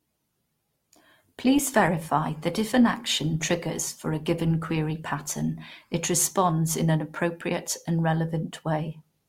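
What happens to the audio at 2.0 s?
At 2.0 s the speech is still in an adaptive stream starting at a low bitrate, lasting from 0.0 to 6.0 s. The player began on a cheap version to start fast. The treble sounds thin or synthetic, with stronger codec artefacts. Quality jumps up cleanly at 6.0 s.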